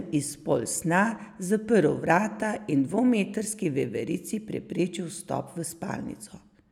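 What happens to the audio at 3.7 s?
Nothing goes wrong at 3.7 s; the speech carries on intact through that moment, with no dropout, click, distortion or other fault.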